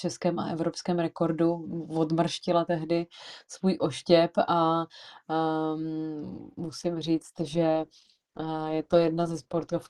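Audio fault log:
6.63 s to the end, adaptive stream at a lower bitrate: the connection slowed and the player switched to a leaner encode, consistent with Opus dropping from 64 to 16 kbit/s, so the speech's quality changes abruptly, artefacts rise, and there is no gap.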